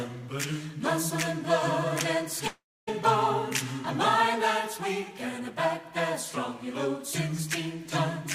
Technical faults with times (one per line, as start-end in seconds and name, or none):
2.47-2.89 long network dropout